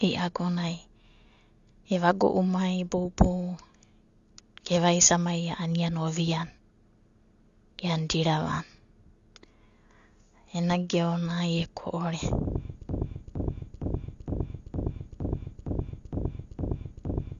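Throughout, the speech sounds dull and warbly, with fizzy sibilants and nothing above 7.1 kHz. This is likely AAC compression at a low bitrate, not a clean low-pass filter. From 12.89 s to the end, a 0.46 s fragment repeats identically ten times: a broken-record loop, with no fading like an echo and no new audio.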